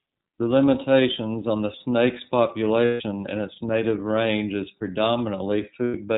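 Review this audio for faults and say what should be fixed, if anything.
The speech runs through the iLBC codec throughout, with plainly audible damage: nothing passes above 4 kHz, and voiced sounds take on a rough, synthetic edge from coding each frame's excitation independently. The texture fits the 13.33 kbps mode with 30 ms frames. Use a wideband codec such as Opus, or a higher-quality link, wherever bandwidth allows.

Lost iLBC frames occur from 2.85 to 3.02 s, just before "in its native range", and from 5.85 to 5.95 s. In each gap the decoder repeats the last pitch cycle blended with noise, producing a held, faintly buzzy vowel. The gaps fit about five and three lost 30 ms frames. Because iLBC frames decode independently, the speech recovers immediately afterwards. Reduce packet loss on the network path, or add forward error correction or redundant frames.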